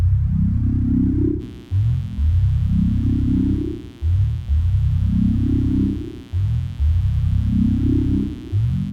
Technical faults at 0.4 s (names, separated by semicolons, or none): none